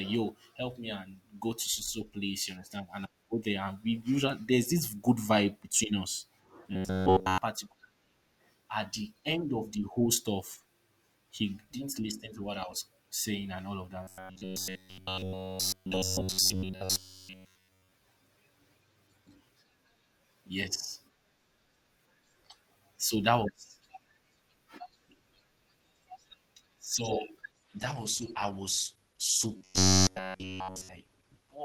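From 6.73 to 7.38 s the speech collapses into a rigid metallic buzz at 93.8 Hz, likely robotic sound from repeated short buffers. Audio arrived too slowly, so a roughly 10.7 ms slice was looped in place of all the real signal. The steady buzz pitch, locked to that slice length, distinguishes it from ordinary codec warble. The same buzz returns from 14.03 to 17.92 s, right after "saying and all of".

At 27.52 s the quality abruptly drops, with a more artefact-laden texture through the end of the clip. This adaptive stream at a lower bitrate, which fits a drop to Opus at about 16 kbit/s, shifts quality without any gap. That distinguishes it from a dropout. Within this stretch, 29.57 to 30.89 s brings the 93.8 Hz buzz once more.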